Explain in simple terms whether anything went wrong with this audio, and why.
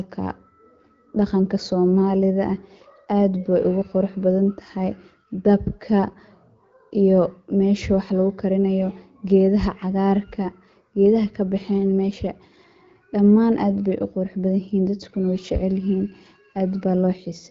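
Listening through this recording, nothing stood out as having gone wrong.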